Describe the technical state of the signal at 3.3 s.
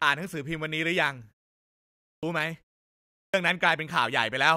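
At 3.3 s you're right inside a clipped start after a pause, running from 3.22 to 3.34 s. After about 0.67 s of silence the output path was still waking up, so roughly 117 ms of speech is swallowed and the next word snaps in without its opening sounds.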